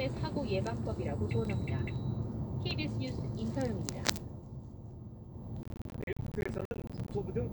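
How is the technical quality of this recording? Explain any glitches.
There's one real problem: a burst of processor overload crackle from 5.63 to 7.12 s. The processor kept missing its deadlines, and dozens of tiny buffers, fitting roughly 10 ms each, came out as silent dropouts with hard edges. Strung together, they make a gritty, tearing crackle riding on the sound until the load eases.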